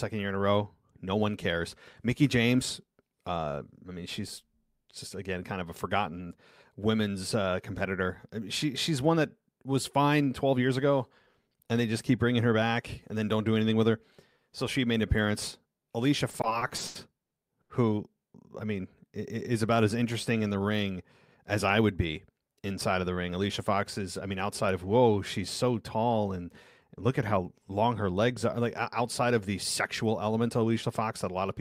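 Repeated stalls (stutter) run from about 16.31 s to 17.71 s in this speech clip: nine short breaks in that stretch, the longest 80 ms, adding up to about 360 ms of held-over sound, roughly a quarter of the span. Packets were reaching the receiver late or slower than playback, so its buffer kept draining and it stretched the last sound to cover each wait. Nothing is lost, but the speech drags and stutters through that section.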